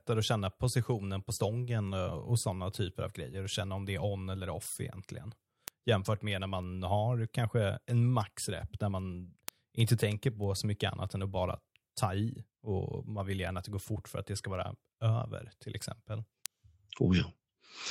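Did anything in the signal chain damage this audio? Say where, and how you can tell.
Yes. Word clock ticks run through the speech from 0.29 s to 17.73 s, sharp clicks of uneven strength repeating roughly every 0.3 s, around fifty in all. The damage sits at the digital interface into the converter: the receiving device is running on its own clock rather than locking to the sender's, with a mismatch on the order of 70 ppm. Each time the two clocks slip by one sample, a sample is dropped or repeated and the neighbouring samples are misread, producing a tick.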